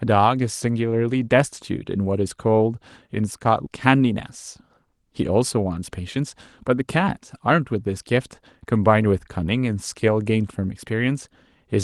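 At 3.66 s there's a skip ahead: roughly a third of a second got dropped, likely by an overflowing jitter buffer, and playback just jumps straight across with no gap. Then come two jitter buffer speed-ups, 5.57 to 6.25 s at 110% and 6.65 to 7.76 s at 106%. The receiver trims tiny pitch-period slices to drain the excess delay, about 70 ms each time, so the sound hurries along without any pitch shift.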